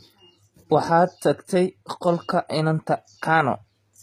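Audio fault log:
throughout: likely HE-AAC compression. Treble is rebuilt from copied lower bands, so s sounds turn gritty and lispy. Nothing above 14.9 kHz, which fits about 20 kbps.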